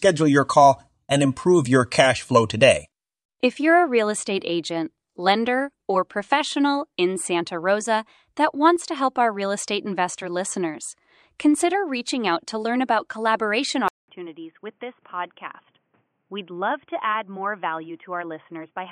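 Input switched to a poorer device at 13.88 s: after a 200 ms gap the speech returns about 10 dB quieter and boxy, with nothing above 3.4 kHz and a faint new background noise, until the end. A headset call profile likely took over.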